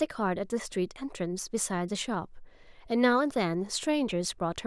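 Speech recording with no audible technical faults.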